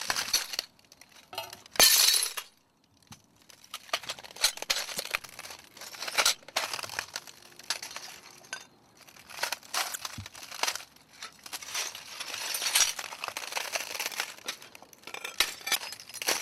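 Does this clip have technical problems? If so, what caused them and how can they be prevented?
Yes, damaged data in a compressed stream at 0.30–0.35, 4.95–4.99, 9.92–9.96 and 15.71–15.76 s. The decoder misreads corrupted frames and resynchronises, leaving brief vertical disturbances about 40 ms wide on spectrogram and waveform. Transfer and store files with checksums or error-protected containers.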